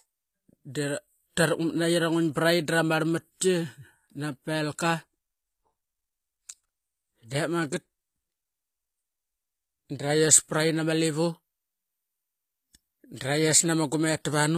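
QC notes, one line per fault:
Throughout: HE-AAC compression, likely at a low rate around 24 kbps, going by the sound. The top end above 14.9 kHz is simply gone, and the treble below that is rebuilt from copied lower bands, so the s sounds come out plainly gritty and a bit lispy.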